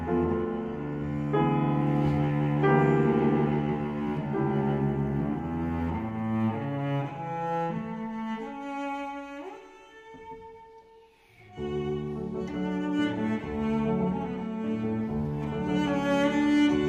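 Nothing in the audio stood out as a technical problem on listening.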